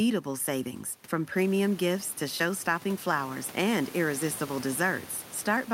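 No technical faults can be heard in this speech recording.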